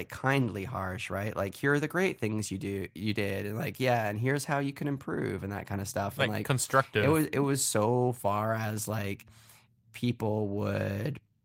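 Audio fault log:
No technical faults can be heard anywhere in the speech signal.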